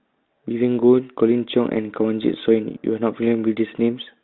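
Nothing in this speech recording stands out as a fault; it's simply a G.726 line at 32 kbit/s doing its ordinary job, with the sound held to the usual telephone band of roughly 200 Hz to 3.7 kHz and only the light coding roughness you'd expect from that setting.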